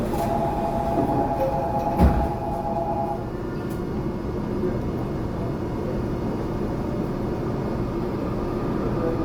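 Throughout, the sounds turn grainy, rough and noisy, with little swirling. Bands stay filled up to 20.2 kHz. This is likely Opus compression at roughly 24 kbps.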